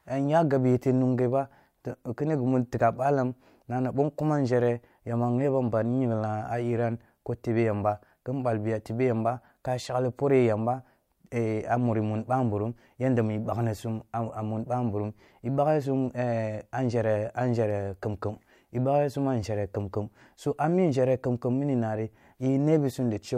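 The speech recording has no technical faults to report.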